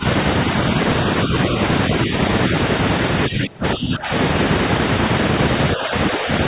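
Speech suppressed in double talk dips the level at 0–0.04, 2.05–2.13, 3.28–4.11 (deepest, about 20 dB), 5.76–5.94 and 6.11–6.28 s, likely from an echo canceller ducking both talkers.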